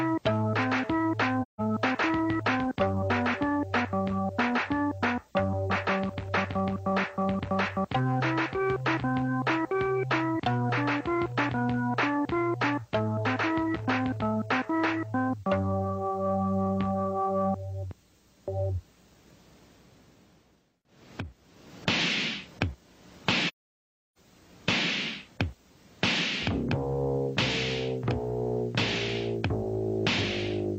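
At 1.42 s the sound fades into a short hole of about 170 ms, and from 23.48 s to 24.18 s a longer soft-edged gap of about 680 ms follows. Both are AAC frame loss with muting: missing frames were decoded as silence, with overlapping windows easing the fade out and back in.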